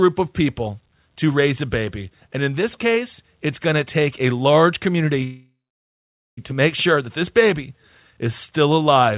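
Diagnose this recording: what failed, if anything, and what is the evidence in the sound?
Call audio freeze, 5.24 to 6.39 s, at the network and jitter-buffer stage. The speech halts, its last sound fades into 0.85 s of silence, then resumes where it stopped, nothing lost. Packets likely stalled, draining the buffer and adding 1.13 s of delay.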